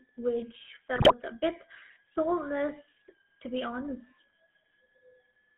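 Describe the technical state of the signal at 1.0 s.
At 1.0 s the signal sits inside a burst of GSM bit errors running from 0.96 to 1.13 s. Bits were flipped on the radio link before the speech decoder received them, so corrupted filter, pitch and gain parameters were rebuilt as if valid. With roughly 8.6 percent of bits wrong, each 20 ms frame in that stretch comes out distorted, and the 0.17 s span fits about eight damaged frames. The speech breaks up into squawks, pops and a gargling quality, with sudden jumps in level and spectral shape.

Underneath, the whole clip carries the GSM full-rate codec. The coder models the vocal tract and excites it with a sparse, regularly spaced pulse train, which fits the original 13 kbps full-rate scheme. The line is limited to roughly 150 Hz to 3.4 kHz, so the sound is thin and boxy. The codec damage is plainly audible as a buzzy, gravelly roughness across the speech.

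A switching supply whistle is also present throughout. A power converter is cycling at an audible rate, producing a high tone that wanders between about 1.6 and 1.9 kHz. It sits about 35 dB below the speech. It is faint, but it is steadily present under the rest of the signal.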